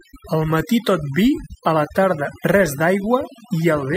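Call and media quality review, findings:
Overdone noise removal, whole clip. Background near-silent with twinkling specks. Probable component: noise suppressor set too aggressive. Bands near the noise estimate are pulled far down or gated off, taking quiet speech detail with them. Spectrogram: floor cleared to black, scattered isolated bright dots between phrases, ragged holes in speech harmonics. Waveform: flat gaps between phrases.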